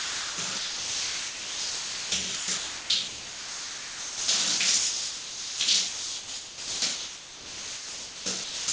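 From 0.0 to 4.28 s, again from 4.58 to 5.6 s, and from 5.88 to 8.68 s, the sound comes through in choppy fragments, with most of each stretch (about 3.6 s, 0.84 s and 2.5 s) replaced by a flat synthetic hiss. This is sound chopped by the voice detector: the sender likely kept gating the signal off and substituting comfort noise. Across the clip, nothing is heard above 8 kHz from the call path.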